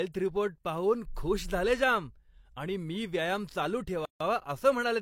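The speech in this clip was encoded as separate pieces and joined without trimming the encoder delay or the padding on the last frame, which leaves a gap at a join of encoded pieces. From 4.05 to 4.21 s, about 152 ms of silence opens in the middle of continuous speech. Its edges are smeared by the codec, and the speech then resumes from exactly where it broke off, with nothing missing.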